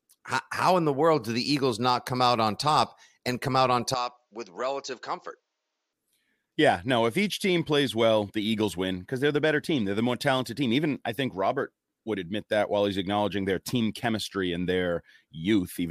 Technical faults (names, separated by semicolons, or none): input switched to a poorer device